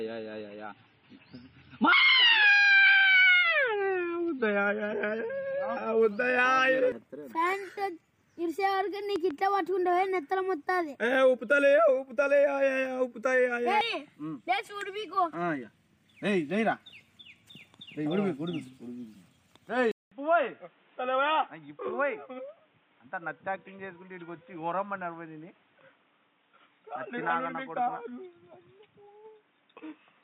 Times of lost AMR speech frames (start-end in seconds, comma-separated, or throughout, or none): none